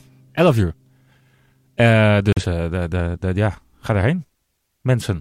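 At 2.33 s a digital broadcast dropout mutes the speech until 2.44 s; about 43 ms of programme is lost, consistent with one corrupted frame.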